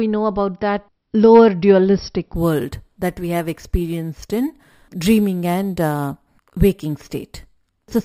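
From 2.36 s, just after "about that lower dualistic", to the end, a bright metallic fizz rides on the speech, rising and falling with its level. This is imaging from sample-and-hold upsampling: each sample was simply repeated without smoothing, which fits a 12 kHz source raised to 44.1 kHz, leaving mirrored copies from 6 to 12 kHz at about -23 dB.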